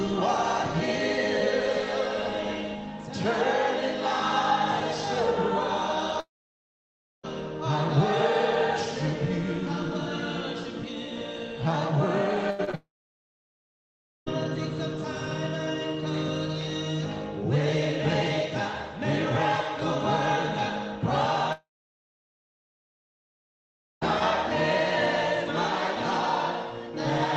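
From 6.20 to 7.25 s the sound stops. The last sound smears into a fading buzz, then about a second of silence follows. This is a long network dropout, likely caused by a stall in packet arrival. Playback resumes without the lost part.

From 12.51 to 12.75 s there is repeated packet loss. Three short holes, the longest 80 ms, are patched by stretching the previous sound. About half the span is filled this way. It sounds choppy and robotic.

Straight after, from 12.75 to 14.28 s, a second long network dropout begins, likely from the same network trouble. A brief buzz gives way to about 1.4 s of silence.

A third long network dropout runs from 21.52 to 24.03 s, likely another network outage. After the fading fill, about 2.4 s of silence follows, and the missing audio never returns.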